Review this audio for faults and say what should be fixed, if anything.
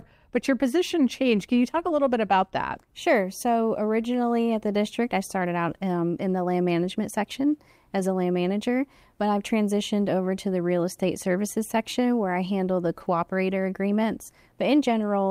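Nothing in this audio needs to be fixed, as no faults can be heard.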